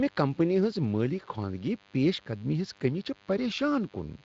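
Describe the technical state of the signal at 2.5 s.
At 2.5 s the speech carries a DECT cordless phone buzz, present from the start of the clip to the end rather than only at this moment. A nearby DECT handset or base transmits a brief radio burst every 10 ms, and the audio circuitry rectifies that RF energy into the signal path. The result is a thin, constant 100 Hz buzz rich in harmonics, sitting roughly 30 dB below the speech. The Speex coding on the signal does only light damage.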